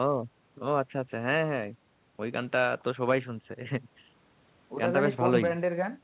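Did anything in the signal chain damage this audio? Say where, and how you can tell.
No, nothing in the chain damaged this speech; the only marks it carries are the call path's usual coding noise and its band limit, with nothing above 4 kHz, which fits a narrowband telephone codec such as G.711 mu-law working as intended.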